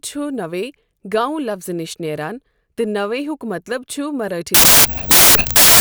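From 4.54 s to the end, the speech falls apart into loud noise, a wrong sample width fault. 16-bit data are being read as packed 24-bit, so bytes get mixed across samples, and only fragments of the real signal survive, running about 1.5 times too fast.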